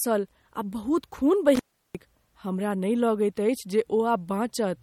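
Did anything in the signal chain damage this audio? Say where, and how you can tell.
Yes. At the codec stage, this is likely low-bitrate audio saved at a high bitrate: an MP3 encoded at a low rate, plausibly around 48 kbit/s, then re-encoded at a high one. Nothing survives above 17.2 kHz throughout the speech, and the second encode cannot restore what the first discarded.

In the analogue wiring, an intermittent contact opens between 1.55 and 1.95 s. For about 0.35 s the line is broken, so the speech cuts out with crackle at each edge and only faint hiss remains in the gap.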